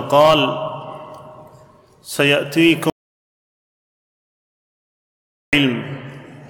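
At 2.90 s the sound cuts off abruptly and is replaced by silence until 5.53 s, about 2.63 s of audio lost. This is an audio dropout to silence, likely from the input being lost while recording carried on writing silence. Unlike a noise gate or fade, there is no decay, tail or residual room tone; unlike a brief packet glitch, the gap is long, and the audio resumes mid-flow.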